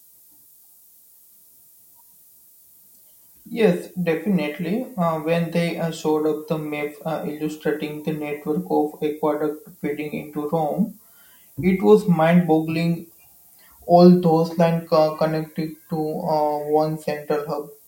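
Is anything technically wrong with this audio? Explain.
Yes. From start to finish, a steady, thin hiss sits under the speech, brightest and most prominent toward the top of the band and weak in the low range. It is low bit depth with noise shaping. The audio is stored with very few bits, which fits 9-bit quantisation, and the rounding error is fed back so the noise is pushed up in frequency. The hiss sits only roughly 25 dB below the speech.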